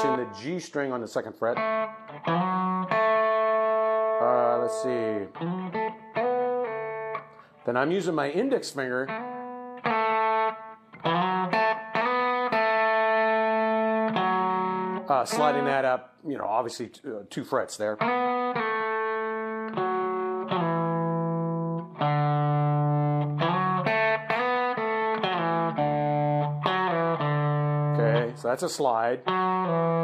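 No technical faults can be heard anywhere in this recording. Nothing in the sound calls for a time stamp or an explanation.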